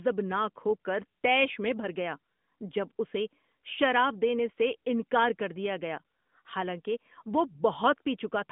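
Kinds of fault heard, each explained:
No kinds of fault are heard in this speech.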